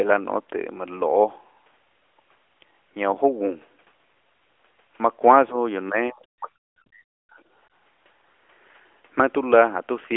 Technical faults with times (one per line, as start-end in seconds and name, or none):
5.52-5.56 speech suppressed in double talk
5.89-7.37 speech suppressed in double talk